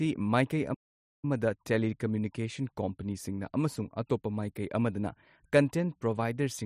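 At 0.74 s the speech cuts out in mid-flow and the output stays silent until 1.25 s, a gap of about 0.49 s, before the speech resumes with "ꯇꯦꯂꯤꯀꯝꯃ꯭ꯌꯨꯅꯤꯀꯦꯁꯟ ꯀꯝꯄꯦꯅꯤꯁꯤꯡꯅ ꯑꯃꯁꯨꯡ". This is likely a playback stall. The player either ran short of buffered data or had its output thread held up, so nothing reached the output for that half second, and the sound picked up again once the data flowed.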